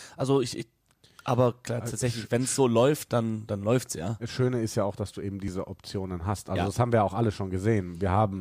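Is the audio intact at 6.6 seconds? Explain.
Yes, the audio is intact at 6.6 seconds, with no audible fault at that moment.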